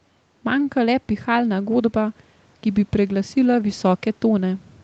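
Listening through this speech clip, nothing stood out as a technical fault.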